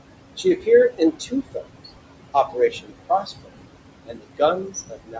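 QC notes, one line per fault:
Throughout: noise suppressor artifacts. The suppressor pulls the room noise down by about 21 dB wherever it judges a band to be steady noise, so the background dips in gaps and returns under speech. On a spectrogram the noise floor shows patchy, flickering holes.
0.37 to 0.67 s, 0.9 to 1.66 s, 2.34 to 2.93 s, 3.09 to 3.62 s, 4.06 to 5.2 s: speech cut by the noise suppressor. Quieter parts of the speech were mistaken for noise and dropped by about 13 to 21 dB, roughly 150 ms, 400 ms, 300 ms, 200 ms and 700 ms in each span. These parts sound swallowed and faint. The waveform shows sudden dents in the envelope, and the spectrogram shows missing energy where the speech was cut.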